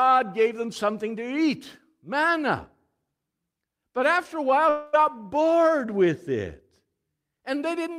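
Right after "after a while", at about 4.69 s, the speech stops moving forward and the last sound just smears on as a fading buzzy hiss for roughly a quarter second, with no true silence underneath. Speech picks back up at 4.96 s on "bored with", but about 240 ms of it never arrives. That's a long network dropout, likely: packets stopped coming, the receiver stretched the final bit of audio to cover the hole, then jumped ahead.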